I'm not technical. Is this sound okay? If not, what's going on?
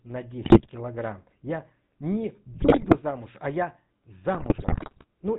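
No. The whole recording has the GSM full-rate codec sound of an early mobile phone: buzzy and gravelly, with no crisp high end, unlike ordinary muffling. It also has GSM bit errors, where the broken radio signal turns the voice into squawks, pops and gargling rather than silent dropouts. They occur at 0.44–0.67 s, at 2.54–2.99 s just before "а я", and at 4.34–5.04 s just after "а я".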